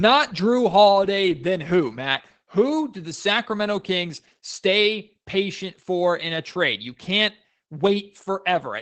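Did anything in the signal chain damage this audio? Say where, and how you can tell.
Yes, at the codec stage: Opus voice compression runs through the whole speech clip, with the band stopping near 8 kHz. The coarse linear-prediction coding, which fits roughly 12 kbps in SILK mode, makes the voice plainly muffled, hoarse and faintly robotic.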